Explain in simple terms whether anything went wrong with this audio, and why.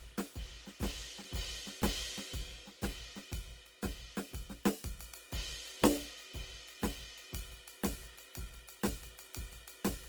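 Something did go wrong, and it runs through the whole clip. The music sounds grainy and rough, with sustained tones breaking into a gritty, noisy texture instead of staying smooth. That points to Opus compression, likely from squeezing the file too hard. Short of data, the encoder keeps each frequency band at about the right loudness but fills in the detail with copied or noise-like material. The highs still reach about 20 kHz, so it isn't muffled.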